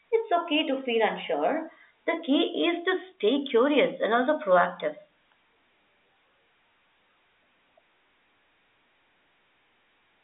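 No technical faults can be heard in the speech. It comes through an ordinary G.711 telephone path, so the sound is confined to a line band of about 300 Hz to 3.6 kHz with nothing above 3.8 kHz, and the coding noise, which fits A-law at 64 kbps, is faint at most.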